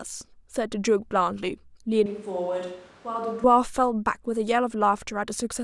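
From 2.06 to 3.44 s, a failed close microphone likely forces a switch to a distant microphone: the speech turns abruptly hollow, roomy, quieter and noisier.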